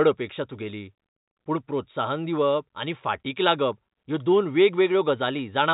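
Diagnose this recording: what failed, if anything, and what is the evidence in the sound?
Nothing in this recording points to a failure at any stage of the chain. The speech has come over G.711 mu-law telephone coding at 64 kbps, so nothing above 4 kHz is present and only a faint level-following quantisation hiss sits under the signal, as that path produces when it works as intended.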